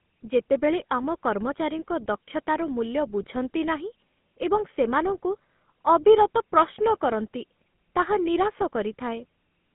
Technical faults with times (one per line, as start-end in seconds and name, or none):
0.00-9.75 GSM full-rate codec